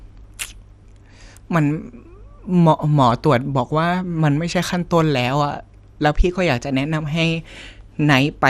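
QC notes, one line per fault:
Throughout: MP2 compression. The speech sounds dull, with nothing above 14.4 kHz, and a gurgling, granular roughness clings to it. Upper detail seems to flicker in and out. The likely cause is MPEG Layer II coding at a rate too low for the material, one that fits roughly 80 kbps. That coder divides the spectrum into 32 sub-bands and shares out a small bit budget, so the highest bands are dropped and the remaining ones are quantised coarsely.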